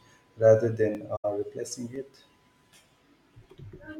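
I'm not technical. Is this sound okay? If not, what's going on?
No. At 0.95 s and 1.96 s there's a tiny stutter. These are overlapping chunks: the speech was handled in one-second pieces that overlap, so about 7 ms repeats at each join. Between 1.16 and 1.25 s the sound fades into a brief, soft gap. That's AAC frame loss with muting: about 85 ms of compressed audio went missing and was replaced with silence, which fits roughly four lost frames.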